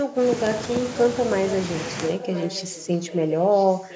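From 0.00 to 0.13 s, 2.06 to 3.16 s, and 3.50 s to the end, a faint copy of the speech returns about 1.01 s late, loudest in the middle stretch. This is an echo leak, likely from a loudspeaker echo canceller, and a distinct delayed repeat rather than a room-reverb smear.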